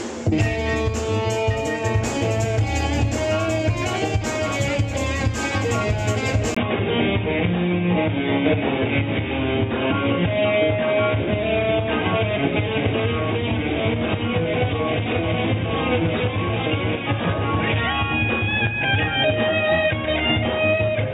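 At 6.55 s the audio drops out for a brief 20 ms gap and comes back dull and boxy, with nothing above 3.8 kHz, and it stays that way to the end. A new background noise sits roughly 30 dB under the signal, while the overall level hardly changes. This is likely an input switched to a poorer device, such as another microphone or a headset's call profile, whose narrower band and own noise replace the original source.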